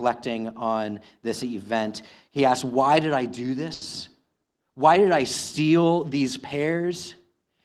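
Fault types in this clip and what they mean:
Short stall from a late packet: just after "did I do", around 3.73 to 3.84 s, a sound is held about 80 ms too long while the receiver waits, then resumes where it left off. Unlike a dropout, nothing is skipped; the speech just runs about 80 ms later afterward.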